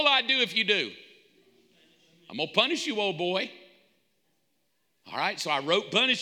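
Clock drift buffer slips recur from 0.19 s to 6.14 s, about seven in all, every 1.19 s. Each is a click in the speech. The likely cause is two clocks disagreeing by a few hundred parts per million, so roughly fifteen samples are dropped or repeated at each slip.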